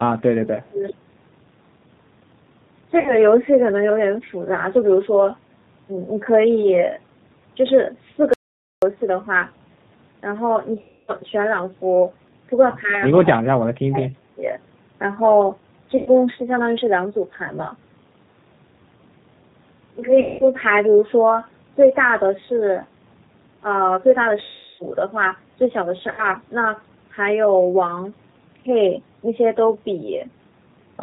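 Throughout the speech, G.729 coding at 8 kbit/s removes everything above 4 kHz and leaves a rough, synthetic edge, which is steady rather than intermittent like the faults below. VoIP packet loss concealed by the speech codec occurs at 3.00 to 3.15 s, 10.81 to 11.12 s, 15.97 to 16.11 s, 20.21 to 20.44 s, 24.43 to 24.85 s and 26.12 to 26.28 s. Each time, the decoder stretches its last sound into a fading buzzy tone or coloured noise, with gaps of about 60 to 360 ms, and the voice stays weak for a short while afterwards. That keeps some sound in the gap. The audio dropout to silence from 8.34 to 8.82 s does not: about half a second of silence, with no room tone, likely from a lost input link.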